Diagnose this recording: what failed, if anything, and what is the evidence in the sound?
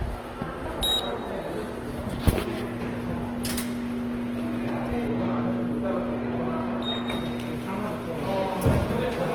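Codec stage, likely Opus compression. All the way through, the tonal parts sound grainy, rough and a bit noisy rather than swirly, yet the top end still reaches about 20 kHz. That points to Opus in its CELT music mode at a low rate around 16 kbps, filling starved bands with folded or noise content.

Separately, from 5.07 to 7.07 s the sound goes dull and muffled. That's de-emphasis applied wrongly in the processing or playback chain: a smooth treble roll-off, about 8 dB down at 10 kHz relative to 1 kHz, undoing pre-emphasis that was never there, then snapping back afterwards.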